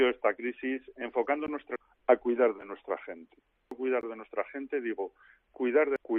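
At 1.47 s, 2.61 s and 4.01 s, blocks of digital silence of 15, 5 and 18 ms cut the sound out abruptly. At 1.76 s, 3.71 s and 5.96 s, damaged data in the compressed stream makes the decoder lose sync.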